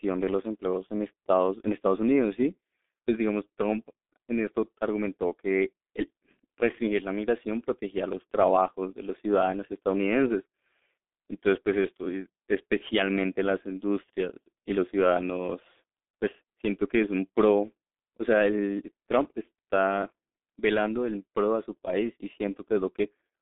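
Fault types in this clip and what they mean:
G.723.1 codec: Throughout, the speech sounds muffled, thin and hoarse, with consonants smeared into one another. Nothing comes through above about 3.6 kHz, and little below 200 Hz. This comes from heavy damage by the G.723.1 telephony codec. It squeezes speech into 30 ms frames at a very low rate, which fits its 6.3 kbit/s mode, and rebuilds the voice from a slowly updated model, so quick transitions and fine detail are lost.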